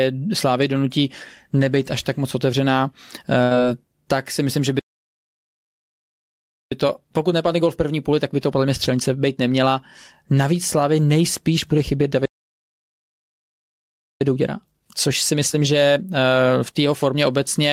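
Speech with a burst of packet loss at 3.43–3.54 s, just before "tak si myslím že": about 73 ms of concealment continues and fades the preceding sound, and 60 ms of audio is skipped. Two playback stalls cut the output to silence at 4.79–6.72 s and 12.25–14.21 s, roughly 1.9 s each, likely from the player starving for data. Each is followed by time-compressed catch-up, hurried at normal pitch: 6.72–9.72 s at 1.15× after "tak si myslím že", and 14.21–17.21 s at 1.25× between "nejspíš bude chybět" and "obecně a v tom".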